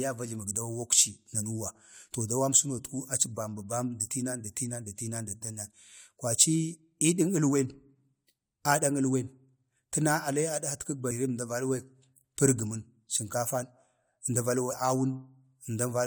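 At about 11.10 s there's a quick blip in the speech, a bit of damaged data in the compressed stream. Bad bytes trip up the decoder, which loses sync for an instant and has to hunt for the next clean frame.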